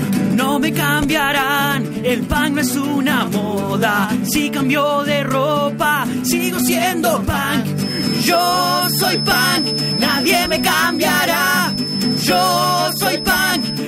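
From 7.73 s to the end, a thin, single-pitched whistle near 5.2 kHz sits about 10 dB under the sound. This feedback whistle is likely a loudspeaker-to-microphone loop held just short of feedback, letting that one frequency ring without growing into a howl.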